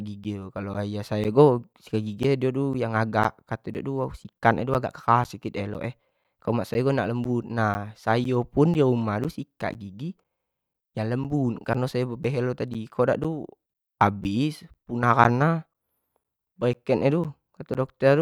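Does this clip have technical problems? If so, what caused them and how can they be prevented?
Yes. Periodic USB or driver dropouts from 0.24 s to 17.75 s: a background task stalls the audio path every 0.5 s, silencing roughly 10 ms each time, seen as evenly spaced gaps. To prevent this, disable or reschedule the interfering background task and give the audio interface its own USB port.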